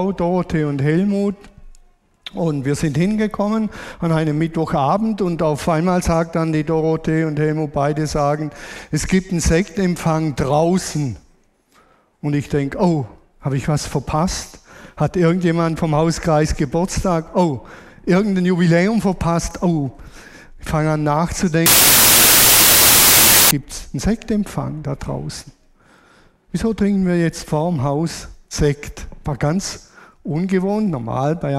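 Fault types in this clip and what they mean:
Wrong sample width: 32-bit samples read as packed 24-bit, so bytes misalign; from 21.66 to 23.51 s loud noise buries the sound, playing at 0.75 speed and lowered pitch.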